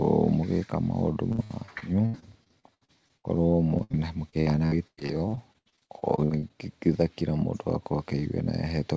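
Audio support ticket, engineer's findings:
Repeated packet loss (robotic sound), 1.32–3.26 s and 3.78–6.51 s. Choppy speech with pieces missing; about a quarter of each stretch is concealment, with gaps up to 80 ms and 96 ms. Jitter buffer/network. Holes recur in bursts, unlike steady G.722 coding noise, which stops at 8 kHz.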